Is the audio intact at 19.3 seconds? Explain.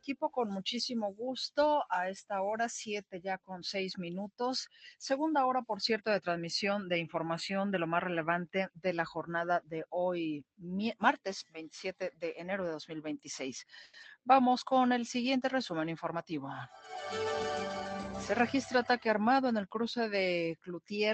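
No. At 19.3 seconds the audio sits inside a jitter buffer speed-up running from 18.32 to 19.46 s. The receiver had built up more delay than it targets and trimmed it by cutting out short chunks one or a few pitch periods long, repeatedly, removing about 50 ms in total. Playback runs at 105% speed with the pitch unchanged, so the passage feels slightly hurried and its timing lurches forward. Unlike a resampling speed change, nothing shifts upward in pitch.

The same moment is also affected by a noise suppressor applied to music or sounds, active across the whole clip. Built for speech, it treats sustained tones, ambience and reverberant tails as noise and pulls them down, swinging the level by about 5 dB while attacks pass largely untouched. The result is pumping and thinning as held sound sinks after each onset. A gate would chop tails to silence abruptly instead, and the call codec's band limit, which tops out near 8 kHz, is a fixed ceiling rather than this moving loss.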